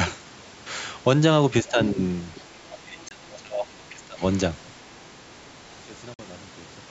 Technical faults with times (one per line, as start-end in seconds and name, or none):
1.63-1.79 speech suppressed in double talk
2.35-2.41 other side's voice leaking through
2.54-4.22 speech suppressed in double talk
3.08-3.11 Bluetooth dropout
3.33-3.38 other side's voice leaking through
6.14-6.19 Bluetooth dropout